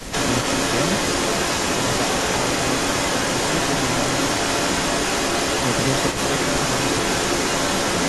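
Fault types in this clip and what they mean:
Echo leak: A far-end echo canceller likely failed to remove what its microphone caught from the loudspeaker, so the sound returns. A delayed copy trails the speech by about 432 ms throughout all 8 seconds, at roughly the speech's own level or a little above.
Speech suppressed in double talk: With both ends active, the canceller likely mistook the talker for loudspeaker echo and attenuated everything together. From 0.05 to 0.11 s the speech dips briefly and shallowly, for well under a tenth of a second.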